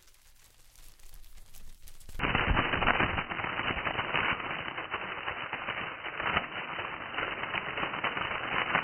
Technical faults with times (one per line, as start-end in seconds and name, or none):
2.19-8.83 input switched to a poorer device